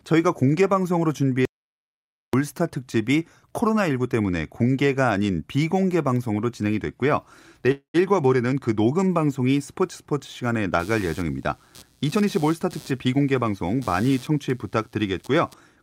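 From 1.45 to 2.33 s, an audio dropout to silence: the input was likely lost while recording continued, so the speech stops dead for 0.88 s of silence, with no room tone.

At 7.71 s, a call audio freeze: packets were likely held up and the jitter buffer ran dry, so the last sound is stretched into a fading buzz with 100 ms of silence. The speech resumes at 7.96 s with nothing lost, now 227 ms later.

From 10.79 to 15.54 s, computer activity noise: processor or graphics load shifts the shared ground, adding a chirping buzz pulsing around 150 Hz, roughly 25 dB below the speech.

From 12.16 to 14.31 s, a jitter buffer speed-up: the receiver trimmed its excess delay by cutting out pitch periods, around a fifth of a second in total. The speech runs at 111% speed with unchanged pitch and sounds hurried.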